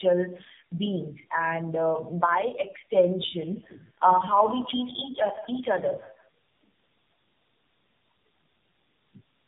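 Tandem speech coding affects the speech from start to finish. The call appears to pass through three AMR-NB stages in a row, with G.711 A-law links between them. At each border the speech is decoded, then coded again. Each coder inherits the previous one's damage and adds its own. The AMR-NB stages run at 7.4, 10.2 and 7.4 kbit/s. The result is rough, muffled and warbly. Nothing is heard above 3.8 kHz.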